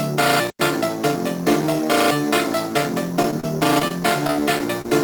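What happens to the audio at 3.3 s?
Right around there you get two bits of short concealed packet loss, at 3.22 to 3.25 s and again at 3.31 to 3.33 s. A sliver of audio arrived too late each time, so the receiver bridged the gap by extending the preceding sound before easing back in. It comes across as a quick smear or wobble.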